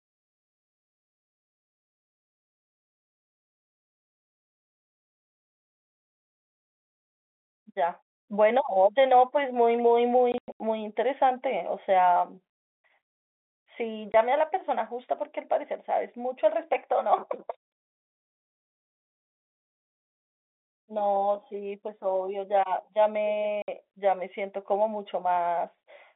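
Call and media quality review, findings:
Packet loss filled with silence, 10.32–10.6 s: dropouts totalling 200 ms scattered across 280 ms, longest gap 100 ms, hard edges. Burst loss in the network path, receiver inserting silence instead of concealment.

14.12 s: single 20 ms hole, hard edges. Fits one lost 20 ms packet.

23.62–23.68 s: 60 ms silent gap, consistent with three consecutive 20 ms packets lost.

G.711 mu-law band limit audible throughout, roughly 250 Hz to 3.6 kHz.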